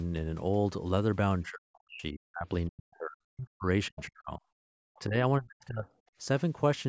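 Speech suppressed in double talk cuts the talker at 1.47–2.47, 2.67–3.66, 3.88–4.4, 4.99–5.16 and 5.4–5.93 s, dropping around 40 dB (only about 10 dB at 4.99 s), likely because an echo canceller could not separate the talker's speech from the overlapping loudspeaker echo. Background gated by the echo canceller pulls the room sound down about 33 dB at 4.63–4.71 s while the loudspeaker plays, then releases it, in speech that carries nothing above 8 kHz from call microphone processing.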